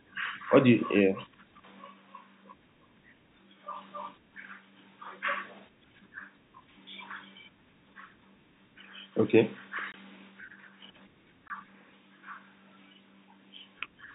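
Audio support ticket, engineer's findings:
Two short dropouts in the speech, each a hard 20 ms hole: 9.92–9.94 s and 11.48–11.50 s. Packet loss filled with silence. Receiver substituted silence for missing audio instead of concealing it, so the signal steps abruptly to nothing and back. Gap length fits one lost 20 ms packet each time. The band-limited telephone sound of the G.711 mu-law path carries through up to the gaps.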